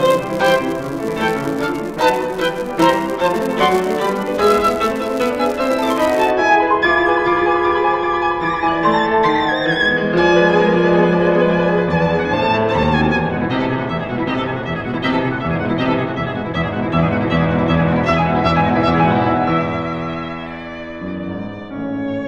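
From the start to about 6.31 s there's a buzz at 200 Hz riding on the sound and tracking its level. That's a filter restarted on every block: the filter drops its state at each block boundary and starts again from silence, so each block opens with a tiny transient, two hundred times a second. At 12.83 s there's a brief underrun with held sample. The output ran dry for about 1.33 ms, a 64-sample gap, and the converter froze on its last value, flattening the waveform. Playback then picked up where it stopped, so it's a faint, soft hitch rather than a click.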